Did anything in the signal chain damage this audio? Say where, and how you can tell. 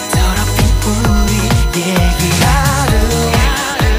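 Yes: a fixed-pitch USB whine runs throughout, built on 1 kHz and loudest at 4 kHz, roughly 15 dB under the signal, as USB frame current leaks through power or ground wiring.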